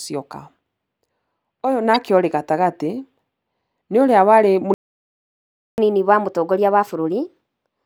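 At 1.94 s a brief glitch cuts across the speech. This is damaged data in a compressed stream: a corrupted stretch left the decoder unable to read that frame, so it lost sync and skipped ahead to the next valid frame header.

From 4.74 s to 5.78 s the speech stops dead mid-flow and the output goes silent for about 1.04 s before resuming. This playback stall was likely caused by the player running out of buffered data, or by its playback thread being blocked, until it could recover.

From 5.78 s to the end the speech runs fast and high, at 1.15 times normal speed and roughly two semitones sharp. This is catch-up at higher speed: after the stall, the player resamples its backlog to play faster, winning back some of the lost time.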